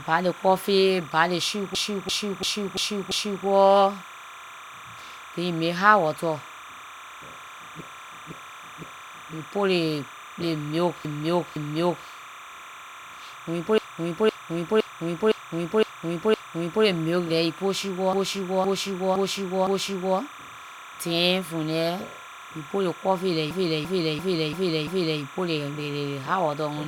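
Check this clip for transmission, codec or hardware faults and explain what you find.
Two faults here: timecode bleed running the whole way through, and six stretches of repeated frames.

Timecode bleed is constant. A 30 fps timecode square wave has leaked in, flipping between roughly 1 and 2 kHz, so there's a chirpy warble sitting well under the speech.

Repeated frames show up at 1.75–3.46, 7.81–9.34, 11.05–12.07, 13.78–16.85, 18.13–20.18 and 23.51–25.22 s. The same 341 ms or 512 ms chunk loops, giving a stutter. Those block lengths fit runs of four or six frames being resent, and together they pad the clip by about 11 s.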